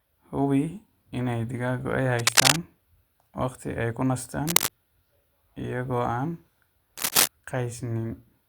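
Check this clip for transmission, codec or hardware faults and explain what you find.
There's a hardware fault in this speech clip: cable scratch noise, in three short bursts, at 2.19 to 2.56 s, 4.47 to 4.69 s and 6.97 to 7.28 s. Each is a dense, ragged scratching laid over the speech, roughly 5 dB louder than it. The likely cause is a worn cable or connector being moved, with its contact resistance jumping around.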